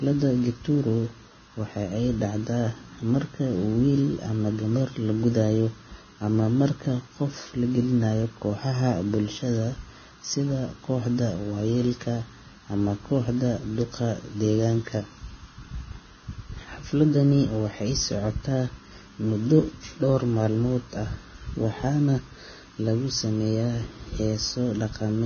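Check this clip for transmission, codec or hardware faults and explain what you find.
There is one fault, heard throughout the speech: Vorbis compression, likely at a very low bitrate near 18 kbps. Nothing is present above about 6.5 kHz. The coarsely quantised treble turns detail into hiss. Sibilants sound grainy, tones rough, attacks blurred.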